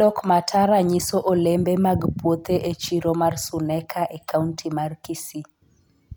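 Nothing in this speech recording stands out as a technical fault; it just runs along without any glitches, dropouts or odd sounds to point to.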